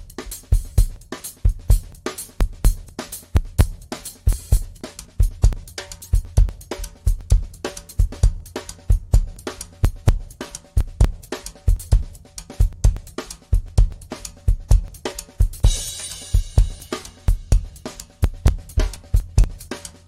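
From 0.24 s to 19.92 s the sound carries periodic USB or driver dropouts, repeating every 0.24 s. At each interval something stalls the USB path or audio driver, and around 10 ms of audio is skipped outright rather than padded with silence, so the waveform jumps straight to later material. That splice makes a steady tick, some seventy in all, audible only while signal is present. A waveform shows abrupt discontinuities at even spacing; a spectrogram shows thin vertical broadband streaks in a regular comb.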